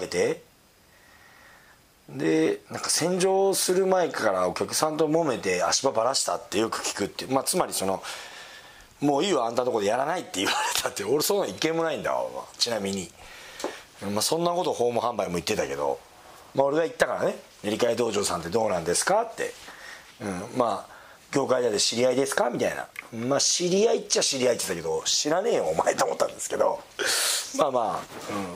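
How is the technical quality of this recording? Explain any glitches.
No glitches turn up anywhere in the recording; the signal holds steady and continuous, with no dropouts, level jumps or other technical disturbances to explain.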